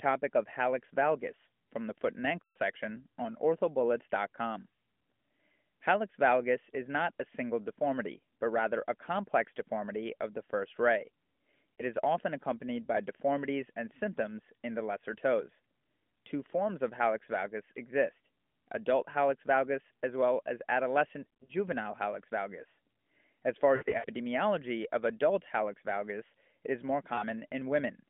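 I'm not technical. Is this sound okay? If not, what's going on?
No. Lost AMR speech frames cause brief dropouts at 2.42–2.58 s (after "from the foot and"), 11.76–11.83 s (before "is often accompanied by"), 21.24–21.52 s (before "hallux valgus"), 23.76–24.06 s and 27.14–27.25 s. Radio errors spoiled short slices of the phone signal, so the phone repeated the last good sound while fading it, leaving blurred, stretched or weak moments.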